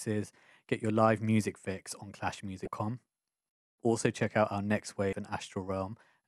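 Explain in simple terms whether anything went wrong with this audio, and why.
Two brief glitches interrupt the speech, at 2.64 to 2.68 s and again at 5.10 to 5.13 s, each lasting about three hundredths of a second. Both come from damaged data in a compressed stream: a small patch of the compressed file got corrupted, so the decoder couldn't make sense of those bits, lost its place, and had to hunt for the next clean starting point. That fumble is what you hear as each quick glitch.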